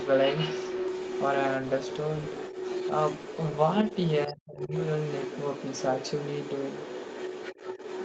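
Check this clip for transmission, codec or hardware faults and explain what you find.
Two echo-canceller faults run through the whole speech clip.

Other side's voice leaking through runs from 0 to 4.34 s and again from 4.59 s to the end. A second voice sits under the talker, only a few dB quieter at first and somewhat quieter later. The likely cause is loudspeaker playback reaching the microphone without being fully cancelled. It is a second voice, not a smeared reverb tail.

Speech suppressed in double talk occurs between 4.27 and 4.74 s, where both voices overlap. The talker drops out almost completely, in pieces adding up to under half a second. This is likely the canceller clamping down on everything it could not separate. These gaps coincide with the overlap, unlike random packet loss.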